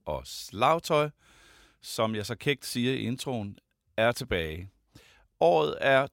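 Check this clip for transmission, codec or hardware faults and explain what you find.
Two bit error spikes occur, single sharp ticks at 2.21 s and 5.67 s. A flipped bit throws one to three samples to about -28 dBFS before they snap back, unlike a dropout click, which leaves a gap.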